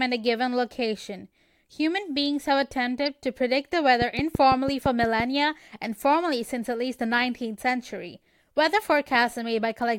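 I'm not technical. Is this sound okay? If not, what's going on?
No. At about 3.06 s there is a corrupt frame decoded: a tiny slice of the compressed speech was damaged, and the player played it anyway instead of hiding it. The damaged piece lasts only a split second, so you hear one quick chirp, squeak, blip or burst of noise that doesn't belong to the voice. A dropout would instead leave a brief gap of silence. Here a wrong, out-of-place sound briefly appears.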